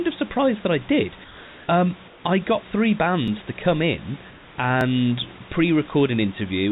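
Comfort noise in place of the background appears in this speech recording at 1.24–1.68 s, between "surprised that i did" and "um I got three", again at 2.08–2.24 s, and at 4.30–4.58 s after "to come in". In each gap the real room background gives way to a smooth, featureless hiss about 2 to 3 dB quieter than the surrounding ambience. The likely cause is discontinuous transmission: the sender stops streaming during pauses, and the receiver fills the silence with synthetic noise shaped only roughly like the room. Repeated buffer faults appear as brief clicks at 3.28 s, just after "um I got three" and before "to come in", and at 4.81 s. Each time, fresh audio arrived late, so the device replayed the previous block once. The repeated blocks last about 2.7 ms, which fits a 128-sample buffer.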